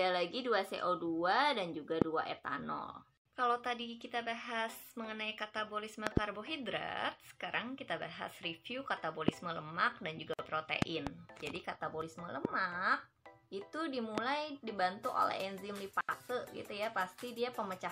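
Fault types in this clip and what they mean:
Loud pop: six sharp bursts, two of them doubled, roughly 20 to 25 dB above the sound, likely a voltage pulse. The sound continues beneath rather than cutting out.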